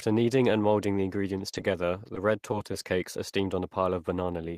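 Right after "kneading and molding the", from 1.38 to 1.74 s, there's repeated packet loss giving a robotic sound. Around five short holes, the longest 20 ms, get patched by stretching the previous audio, about 60 ms in all, so roughly a sixth of the stretch turns choppy and robotic.

Then from 2.15 to 2.75 s, just before "cakes are steamed", come scattered short gaps. A handful of tiny dropouts, each around 10 ms, are filled by continuing the last sound, so you hear brief ticks and little smears rather than anything robotic.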